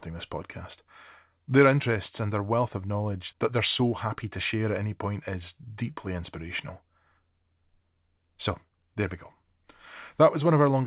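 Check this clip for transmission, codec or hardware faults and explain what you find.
No transmission, codec or hardware faults.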